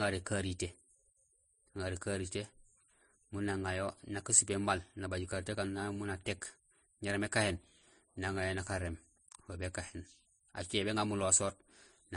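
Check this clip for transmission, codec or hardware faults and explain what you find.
One codec-related fault runs through the whole speech clip. Transcoding between lossy codecs: nothing survives above 10.6 kHz, and two kinds of artefact overlap, each codec's own heard together. A single low-bitrate pass gives one consistent artefact family, not this mix. The likely cause is a Vorbis encode re-encoded as MP3, both at low bitrates, the MP3 stage compounding the Vorbis damage.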